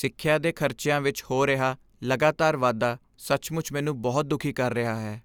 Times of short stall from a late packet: none

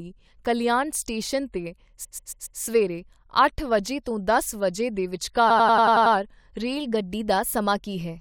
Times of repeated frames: 2.03-2.59, 5.49-6.14

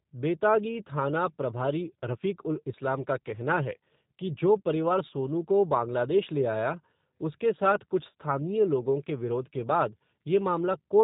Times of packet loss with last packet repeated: none

